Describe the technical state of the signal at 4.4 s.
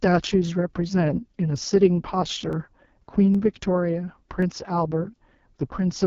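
At 4.43 s there is a single sharp click, likely from dropped samples: a fraction of a millisecond of the stream goes missing, so the waveform jumps straight from one value to a later one. Far too little is lost to remove any sound, but the discontinuity is audible as a tick. In the waveform it appears as a vertical step. On the spectrogram it is a thin vertical line running across the whole band at that instant.

Underneath, and present at 4.4 s as throughout, is heavy damage from the AMR wideband (HD Voice) codec. The raspy, rough texture fits its lowest 6.6 kbit/s mode, where the pulse-driven vocal tract model struggles to rebuild the speech below 6.4 kHz and the region above is filled with shaped noise. On a spectrogram the content stops at about 7 kHz, with smeared, grainy harmonics and a diffuse noise band at the top.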